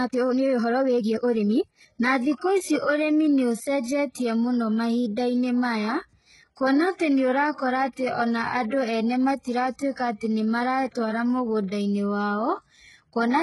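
From 0.0 to 1.88 s the speech runs about 1.59 times faster than normal. This is likely a time-stretched section: software squeezed the audio by dropping short pieces. The pace is rushed but the pitch holds, which distinguishes it from a simple speed-up that would also raise the pitch.

From 3.83 to 3.86 s, about 34 ms before a sharp attack, a short hiss rises and the onset itself sounds softened. This is pre-echo: quantisation noise spread across a transform block fills the quiet moment before the transient. Unlike a real echo or reverb tail, it comes before the sound rather than after it.

Throughout, the treble is bright but gritty, and sibilants turn metallic and lispy. The harmonics do not line up above the crossover. This points to heavy HE-AAC compression, likely at around 12 kbps, with spectral band replication copying lower bands upward. Plain low-pass codecs give dull treble instead of this synthetic sheen.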